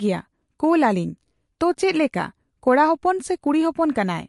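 MP3 compression damage runs through the whole clip. Nothing survives above 11.3 kHz, and the speech sounds watery and swirly, with chirpy sibilants and smeared onsets. That points to a low bitrate, likely around 50 kbps, where the encoder cuts the treble and drops weak frequency lines frame by frame.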